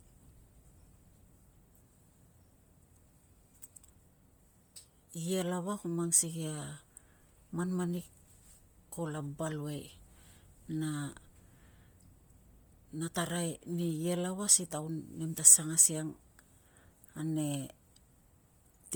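Bluetooth LC3 compression runs from start to finish across the speech, likely the result of the link's codec. LC3 codes the signal in short transform frames, consistent with 10 ms blocks here, and at a tight budget it discards much of the upper spectral detail and patches the gaps with synthetic noise. The damage is heavy: the voice takes on a grainy edge, with a breathy haze over the top end, which fits a rate of around 32 kbps. Nothing reaches above about 20.1 kHz.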